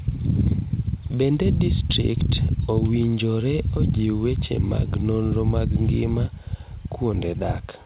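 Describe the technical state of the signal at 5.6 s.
At 5.6 s the speech is intact, with no dropout, glitch or distortion, and it carries the narrow call-path band that stops at 4 kHz, which fits a 64 kbps G.711 mu-law codec.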